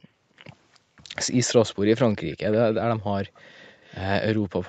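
Echo leak from 3.62 to 4.01 s: a faint copy of the speech returns 356 ms late, likely loudspeaker pickup the far-end echo canceller missed.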